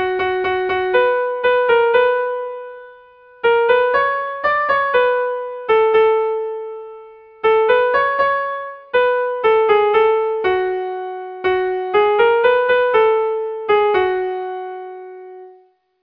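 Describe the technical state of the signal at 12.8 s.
At 12.8 s the signal is intact, with no audible fault at that moment.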